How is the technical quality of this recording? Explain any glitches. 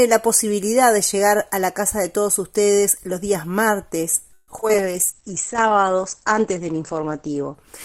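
The recording has two network faults in its second half, starting just past the 4.3-second mark.

Repeated packet loss (robotic sound) runs from 4.33 to 4.76 s. Audio packets kept arriving late or not at all, and the receiver filled each hole by stretching the last good sound forward. About 43% of that span is patched material: five separate holes, the longest around 145 ms, with roughly 80 ms lost outright. The result is choppy stuttering with pieces dropped out.

A call bitrate drop follows at 4.79 s and lasts to the end. The connection's bandwidth estimate collapsed, and the encoder was told to spend far fewer bits. The sound points to a fall from about 96 kbps to around 11 kbps, held at its lowest for about 2.3 s. With so few bits, coding turns coarse and the top end is cut from about 20 kHz down to 8 kHz, so the audio becomes muffled, rough and watery.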